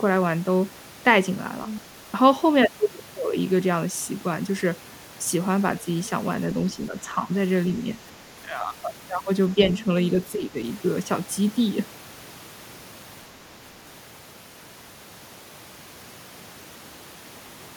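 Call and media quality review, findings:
Other side's voice leaking through, 1.67 to 1.80 s: a brief second voice under the talker, about 10 dB below the speech. Likely residual echo: the device's loudspeaker playback reached the microphone and the echo canceller left part of it in the signal. Approximately 40 words total for this kind.

Speech suppressed in double talk, four spots: the talker's level dips at 6.76 to 7.31 s (about 0.3 s affected in total, down about 5 dB), 8.45 to 8.67 s (about 0.2 s, about 5 dB), 9.83 to 9.89 s (about 10 dB), and 10.35 to 10.57 s (about 0.2 s, about 10 dB). Likely the echo canceller: the far side was playing on the loudspeaker while this side talked, the canceller could not tell local speech from echo, and it turned both down.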